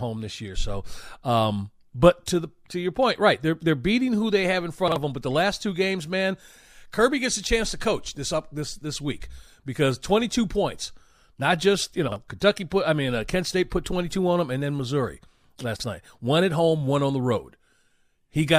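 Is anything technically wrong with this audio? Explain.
Yes. Chunks out of order occur in this speech at 4.88–4.96 s (between "who they have in" and "of them"), 12.08–12.16 s (after "points not just you") and 15.76–15.84 s. Each time, a 40 ms chunk plays one slot late, swapping with its neighbour. Nothing is missing, but the sound briefly jumbles at the hard joins. The waveform shows abrupt discontinuities, and the spectrogram shows thin vertical broadband lines with harmonic contours stepping out of sequence.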